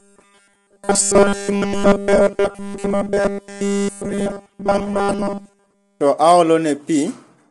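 Robotic sound from repeated short buffers runs from 0.01 to 6.01 s of this speech clip: a rigid metallic buzz at 200 Hz that loosely tracks the words. Audio was likely arriving too seldom, so nearly all of that stretch consists of a repeated 5 ms buffer while the real signal was skipped. Low-delay AAC compression is plainly audible throughout, with rough, grainy voicing, noise between harmonics and nothing above 11.6 kHz. This fits AAC-ELD at around 32 kbps, whose short frames resolve pitch harmonics poorly.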